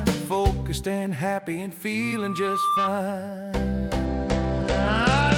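The audio carries two faults. From 2.02 to 2.96 s a loudspeaker feedback squeal appears. A single tone near 1.2 kHz swells over roughly the first 0.7 s and ends up around 5 dB above the rest of the sound. A microphone is picking up its own loudspeaker, and the loop gain exceeds one at that frequency. From 4.05 s to the end, a Bluetooth SBC bit pool drop sets in. The treble goes dull and a gritty noise rises. The top sub-bands are being starved and the rest coarsely quantised. The sound fits a bit pool cut from 31 to about 12, roughly 88 kbps, on a congested link.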